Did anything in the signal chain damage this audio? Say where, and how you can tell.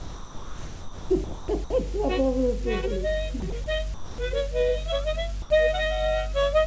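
Yes. From 0.00 to 1.70 s and again at 3.40 to 3.66 s the sound is choppy. This is likely sound chopped by the voice detector during call processing.

At 3.94 to 4.18 s and 5.42 to 5.50 s the sound gives way to steady noise. The likely cause is sound dropped by the voice detector, with comfort noise filling the gap. The G.722 call path also leaves nothing above 8 kHz.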